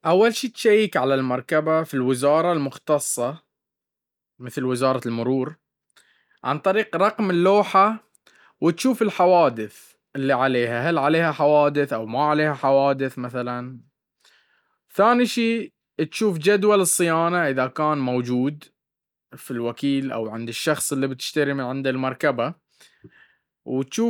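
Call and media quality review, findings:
Nothing to flag on this speech recording; no faults turned up anywhere along the way, so there's no ticket to raise here.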